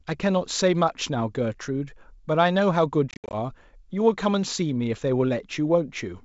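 It's speech over a G.722 wideband call, and between 3.11 and 3.35 s there's packet loss on the ADPCM call: about 160 ms of hard-edged gaps scattered over 220 ms, the longest 70 ms. After each hole the decoder's predictor and step size have drifted, so the sound comes back slightly distorted before settling.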